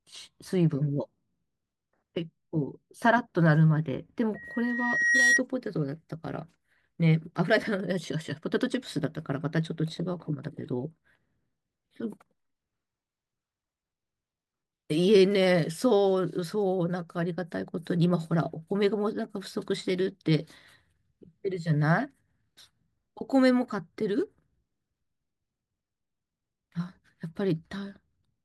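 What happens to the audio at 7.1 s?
Nothing goes wrong at 7.1 s: the speech carries on intact through that moment, with no dropout, click or distortion.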